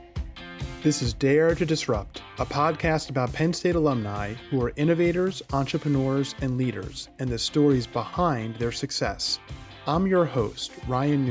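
Nothing in the audio stood out as a technical problem on listening.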